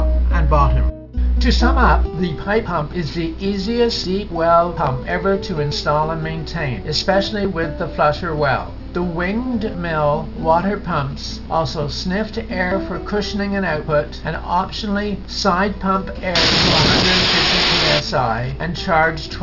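From start to finish the audio carries aliasing. Content above a fold point at 6 kHz was never filtered out when the sample rate was reduced, which points to a drop from 48 kHz to 12 kHz, so those high frequencies mirror back down as false, unrelated tones, fairly strong at roughly ten decibels under the wanted signal. Bright detail sounds gritty and metallic. A spectrogram shows energy packed right up to the 6 kHz edge, with reversed, mirrored streaks below it.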